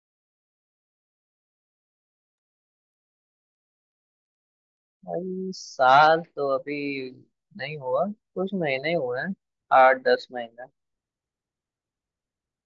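No technical faults can be heard anywhere in the recording.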